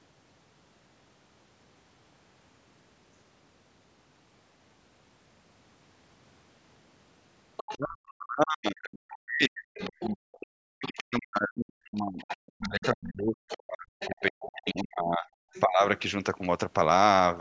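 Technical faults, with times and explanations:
7.57 to 15.61 s (at 7.57 to 7.74, 9.76 to 11.03, 11.84 to 12.86, 13.48 to 14.82 and 15.53 to 15.61 s), other side's voice leaking through: a second, fainter voice sits under the main speech, mostly about 15 dB down, nearer 20 dB down in the 9.76 s stretch and a brief, quieter scrap around 25 dB down at 15.5 s. This is likely loudspeaker sound from the far end reaching the microphone and not being fully cancelled, so the stray voice arrives in short bursts and longer runs.
7.73 to 15.83 s, speech suppressed in double talk: across this stretch the main speech keeps sinking and breaking up. Around seven seconds of it is affected, with the deepest dips reaching roughly 40 dB, enough to pull the voice almost to nothing in places. The leaked voice above falls within this stretch, so both ends seem to be talking at once. The echo canceller, unable to tell its own talker from the returning echo, turned the whole signal down rather than let echo through.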